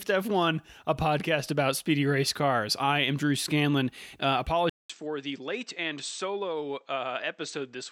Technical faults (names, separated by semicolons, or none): input switched to a poorer device